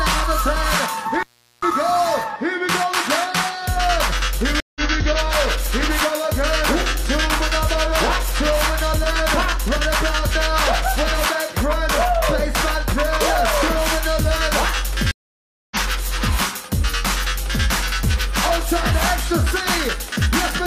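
At 1.14 to 1.71 s an intermittent contact opens the line for about 396 ms, showing as a gap with crackle spikes at each edge and faint hiss between. Stream reconnects at 4.60 s (155 ms silence, resuming roughly 150 ms later) and 15.11 s (599 ms, resuming roughly 700 ms later) leave clean blank gaps, with content skipped and a faded-in restart.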